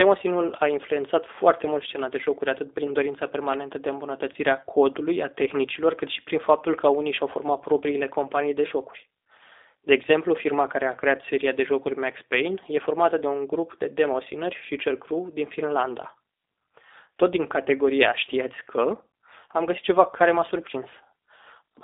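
From the start the speech has the rough, slightly synthetic edge of the G.729 codec, plainly audible here, with the band squeezed to roughly 300 Hz to 3.7 kHz. That fits an 8 kbit/s stream rebuilding speech from a filter and a few pulses per frame.

At 4.33 to 4.36 s there's a brief VoIP packet loss concealed by the speech codec. It sounds like about 10 ms of missing audio, which points to a single lost frame. The decoder stretches the last sound into a short smear and takes a moment to settle.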